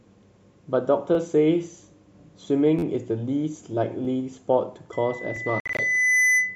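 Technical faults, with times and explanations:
1.15, 2.79 to 2.83, 4.05 and 5.36 s: repeated buffer. At each point the output stutters because fresh audio was late and the same short block was sent out again, with a hard join at every repeat. The block length of 11.6 ms fits a 512-sample buffer. It plays twice at 1.15, 4.05 and 5.36 s, which gives a brief click-like buzz. At 2.79 to 2.83 s it repeats four extra times, giving a longer, rough stutter. The sound then continues with nothing missing.
4.92 s to the end: loudspeaker feedback squeal. A steady 2 kHz tone emerges under the speech and swells over roughly one and a half seconds until it sits about 5 dB above the speech. This is a microphone hearing the loudspeaker it drives. At 2 kHz the loop gain has passed unity, so that frequency feeds on itself and grows until the amplifier limits it.
5.60 to 5.79 s: Bluetooth dropout. The sound cuts out in several holes across about 190 ms, totalling 112 ms of silence, with the longest gap 56 ms. 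Each time the speech resumes further along, as if it had played on unheard. The pattern points to about six wireless audio packets that likely arrived too late to play and were discarded.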